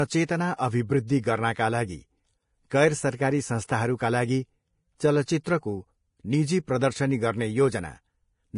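Speech runs the whole way through with heavy lossy-codec damage, most likely Vorbis compression at a low bitrate, around 30 kbps by the sound of it. Nothing survives above 10.5 kHz, and the treble just below that edge has turned into grainy, hissy noise rather than clean detail. The codec has thrown away the fine structure and replaced it with noise of similar energy. Consonants sound rough and the tone gritty. A simple low-pass filter would only dull the sound, and broadband background noise would sit evenly under everything. Here the hiss rides on the signal itself and swells and fades with it. Pre-echo is also audible at 3.67 s and 6.67 s, spreading about 17 ms and 10 ms respectively. Just before a sharp onset, a brief wash of hiss arrives early and the attack itself sounds softened. The noise meant for the loud transform block has leaked into the quiet moment ahead of it. This sets pre-echo apart from a click or dropout, which would land on or after the onset. 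Pre-echo always comes first and blurs the attack.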